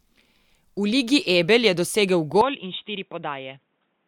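At 2.41 s, right after "je dosegel", the speech abruptly turns dull and boxy and stays that way to the end: nothing is left above 3.8 kHz, the level falls by roughly 10 dB, and a new, faint background noise appears. There is no gap at the switch. This is most likely the input switched to a poorer device. A simple filter or codec bandwidth drop would narrow the band without also changing the loudness and the noise floor.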